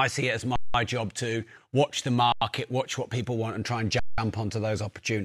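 At 0.56 s, after "see it as", the speech freezes for 0.19 s; at 2.32 s, after "job to watch the", for 0.09 s; and at 3.99 s, after "want and try and", for 0.19 s. Each is an underrun with held sample: the output buffer emptied and the converter held its last value, leaving the waveform flat. Nothing is skipped, and speech resumes where it paused with only a soft edge, unlike a dropout.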